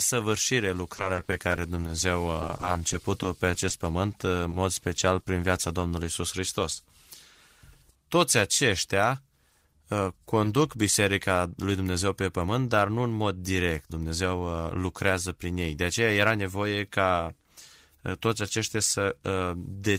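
Repeated packet loss (robotic sound) runs from 0.94 to 5.82 s. Over these nearly five seconds, dozens of short gaps open in the stream, none longer than 20 ms. The receiver patches each one by extending the preceding sound before the next gap arrives. The patches fill about a tenth of the stretch, so the speech turns choppy and takes on a robotic edge, with small pieces missing.

Short concealed packet loss occurs twice, at 9.50 to 9.52 s and again at 10.44 to 10.46 s. Each time, a 20 ms slice of the call failed to reach the decoder in time. Half of it, about 10 ms, was covered by continuing the last sound's pitch or noise before blending back into the real signal. The other 10 ms is simply missing. Each one can be heard as a brief smear or wobble.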